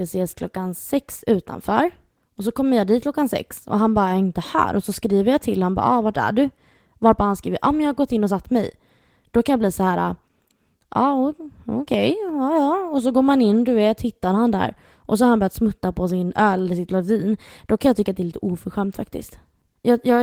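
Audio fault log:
Listening through this speech recording, nothing stood out that would call for a note in the log.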